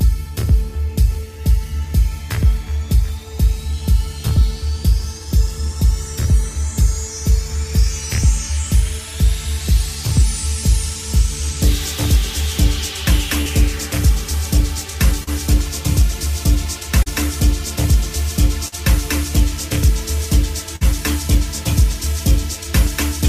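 At 13.41, 15.24, 17.03 and 18.68 s there is short concealed packet loss. Each time, about 40 ms of audio failed to reach the decoder in time. The receiver covered the hole by extending the last sound it had, for roughly 30 to 40 ms, then blended back into the real signal. Each event is heard as a brief smear or wobble. A short sound falling in the gap can disappear.

At 20.76 s, running to 20.83 s, a burst of packet loss occurs. Again about 40 ms of audio is missing. Here the concealment stretches the previous sound for about 49 ms and lowers it as the gap goes on. The result is a held buzz or a fading hiss rather than a wobble. Playback then resumes further along, and the audio that fell in the gap is gone.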